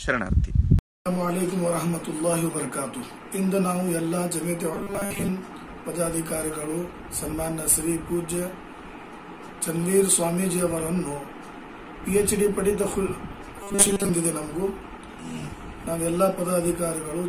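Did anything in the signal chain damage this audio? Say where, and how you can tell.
Yes, at the driver or buffer stage. From 4.74 to 5.29 s and again from 13.63 to 14.10 s, the sound turns into a rigid, metallic buzz pitched at 200 Hz. This is robotic sound from repeated short buffers. The likely cause is new audio arriving too seldom, so the software keeps replaying a 5 ms slice to fill the gaps. Most of the real signal in those stretches is skipped, and the loop's period fixes the buzz pitch.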